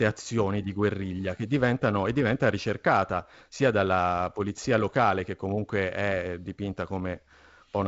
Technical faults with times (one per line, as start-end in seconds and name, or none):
none